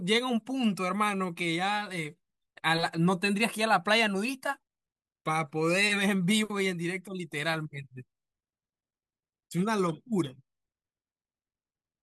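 No technical fault can be heard anywhere in the speech. There is no event to place in time and no mechanism to describe.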